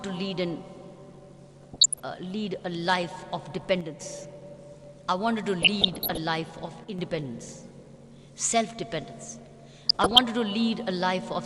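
From 1.61 to 2.01 s, weak reception lets bit errors slip past DAB's error correction into the MP2 audio data, corrupting samples and scale factors so individual sub-bands jump in level from frame to frame. This is DAB burbling, heard as short noise blips and level jumps in single sub-bands over the programme. The length fits roughly 17 damaged frames, with an error rate of around half a percent. The same burbling returns at 5.62 to 6.18 s and at 9.89 to 10.21 s, where errors run slightly heavier.

Between them, from 3.81 to 4.01 s and again from 6.84 to 6.99 s, one channel drops out, likely from one stereo channel being lost briefly before the mono sum. Material common to both sides falls abruptly by about 6 dB and anything carried only in the missing side vanishes, giving a sudden dip in level that snaps back.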